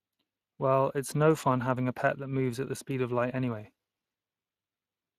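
The whole clip carries audible Speex codec damage: speech sounds hoarse and grainy, fitting a mid-range bitrate near 22 kbps, with nothing above 15.4 kHz.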